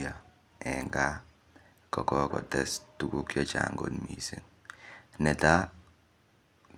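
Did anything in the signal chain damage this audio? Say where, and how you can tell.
No, nothing in this speech recording stood out on listening as damage from any stage of the signal chain.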